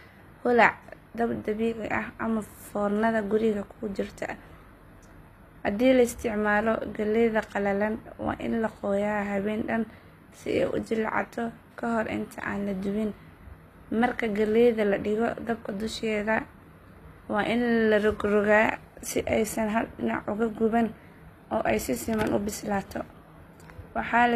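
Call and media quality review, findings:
HE-AAC compression, throughout the speech. Sibilants gritty, lispy, metallic; treble extended but unnatural. Likely cause: HE-AAC spectral band replication, treble rebuilt by copying lower bands upward, fitting a low bitrate near 24 kbps. Spectrogram: repeated, smeared upper-band texture; hard ceiling at 14.9 kHz.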